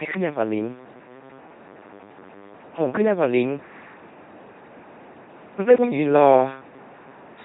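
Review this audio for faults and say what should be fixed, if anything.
The LPC-10 vocoder damage runs through the whole clip. The speech is heavily degraded into a buzzy, mechanical robot voice. Nothing is present above 3.9 kHz. Each stretch is rendered as either a pulse-driven buzz or noise, with no blend of the two. Where that choice goes wrong, buzz or hiss replaces the natural sound. This fits a 2.4 kbit/s LPC-10 coder driving a short all-pole filter. To prevent it, carry the audio with a modern wideband codec at a higher bitrate.

Clock slip clicks appear from 0.18 s to 7.04 s. They are faint, regular ticks, about ten of them, spaced roughly every 0.7 s. The steady spacing suggests two devices on unsynchronised clocks. A single sample is likely dropped or repeated whenever their drift adds up to one whole sample. The rate points to a clock mismatch of around 30 ppm. To prevent it, lock both devices to one shared clock or resample with drift correction.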